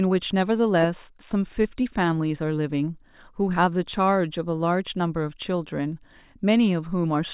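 No technical faults can be heard anywhere in this speech clip. There is nothing to place on the timeline.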